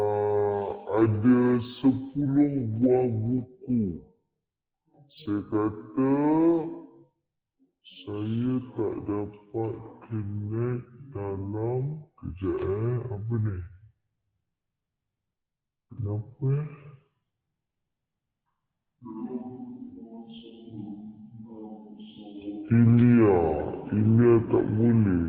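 Throughout, stereo read as mono: interleaved left and right samples play as one channel, so audio runs at 0.5 speed, 12 semitones low, with a faint mirrored image up high, unlike a plain rate mismatch.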